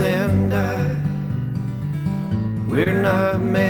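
At 2.83 to 2.88 s, a short concealed packet loss occurs: about 20 ms of audio failed to reach the decoder in time, and the receiver bridged the gap with about 23 ms of synthesised continuation before blending back. It comes across as a brief smear in the sound.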